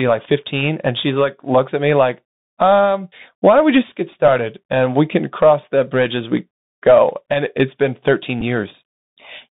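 The whole clip carries the Bluetooth CVSD headset codec. The speech sits in a narrow band from about 150 Hz to 3.7 kHz. Nothing brighter survives. The damage is plainly audible: a granular hiss under the speech, scratchy s sounds and harsh loud high sounds. The coarse one-bit step cannot keep up. This fits a 64 kbps headset link.

At 8.41 s there is a Bluetooth headset packet repeat. About 7.5 ms of audio went missing, which fits two lost packets. The chip decoded the previous packet's bits again to fill the gap. The result is a short buzzy tick, not a lasting buzz.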